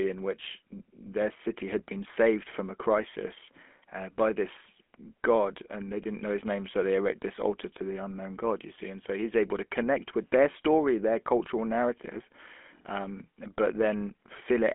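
Speech clip passed throughout through a GSM full-rate codec, which rebuilds the vocal tract from a coarse, pulse-driven excitation at a rate that fits 13 kbps. The result is a plainly audible buzzy, gravelly roughness, with a line band of 250 Hz to 3.4 kHz and nothing above 3.7 kHz.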